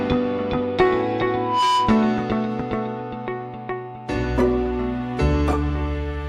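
At 1.34 s a loudspeaker feedback squeal starts: a single tone near 994 Hz swells over roughly a third of a second until it sits a few decibels above the rest of the sound, then holds until it stops at 2.23 s. The microphone is picking up the loudspeaker it drives, and at that one frequency the loop gain has passed unity, so the tone keeps reinforcing itself until the amplifier limits it or the loop is broken.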